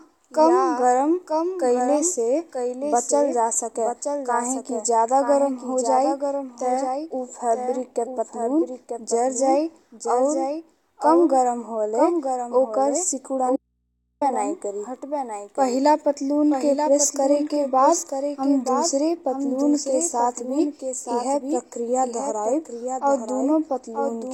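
Throughout the speech, a doubled audio track is present. A second full-band copy of the same material sits roughly a second behind the original and only about 5 dB quieter, so every phrase is shadowed by a clean, dry repeat with no decay or room colouring. The likely cause is the audio being captured twice, once through a slower path, or an edit holding two copies out of step.

From 13.56 s to 14.21 s comes an audio dropout to a faint residue. The signal cuts off abruptly mid-flow for about 0.65 s, and the gap holds only mains hum far below the programme level, roughly 50 dB down. This is not a natural pause: the edges are hard and the background does not fall silent. The likely cause is that the wanted signal was lost while the input after the break stayed live and picked up hum.

From 16.36 s to the end, the audio drops to an adaptive stream at a lower bitrate. With no gap, the quality changes suddenly. 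The top octave thins, nothing survives above 16.3 kHz, and codec artefacts become more audible. The character fits a switch from 96 kbit/s AAC-LC to 32 kbit/s HE-AAC when the connection slowed.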